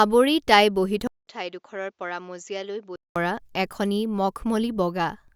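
Just after "তাই বহি", at 1.07 s, a 200 ms gap appears and the speech returns duller and around 10 dB quieter, likely from the input switching to a poorer device. Until 3.16 s, before "পৰা এখনি", the spectrogram shows nothing above 7.6 kHz over a faint new noise floor, and the waveform shrinks.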